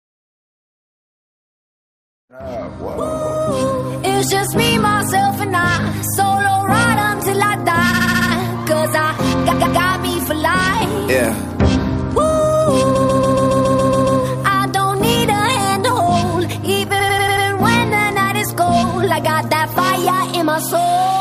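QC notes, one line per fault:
7.93–8.28 s, repeated frames: a 70 ms block of compressed frames was delivered five extra times, so the decoder replays it as a rapid stutter. This adds about 0.35 s.
9.51–9.79 s, repeated frames: a 139 ms block was played twice more, giving a short stutter.
12.95–14.20 s, repeated frames: a 139 ms block was replayed nine extra times, a long mechanical loop that adds about 1.25 s.
16.99–17.45 s, repeated frames: a 93 ms block was played five more times, a stutter that adds about 0.46 s.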